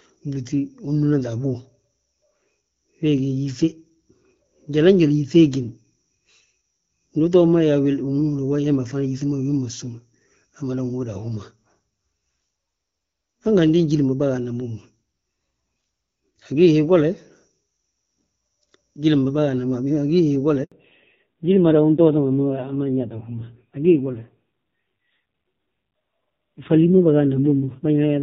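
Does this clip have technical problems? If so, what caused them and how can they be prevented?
Yes. At 20.64 to 20.72 s, an 80 ms handover gap silences the speech completely as the call switches networks. A clean cut with no garbling separates it from packet loss concealment. Prevention: keep the phone on one stable network or enable seamless handover so speech frames keep flowing.

From 20.72 s to the end, a fallback to narrowband removes everything above 4 kHz. This is a lasting bandwidth cut, not a momentary dropout. Before it, the sound has only light, clear-sounding codec damage from HD Voice at around 12.65 kbit/s. After it, the added rasp fits a low-rate narrowband codec near 5.9 kbit/s. Prevention: make sure both networks and handsets support AMR-WB end to end so the call can stay in HD Voice after handover.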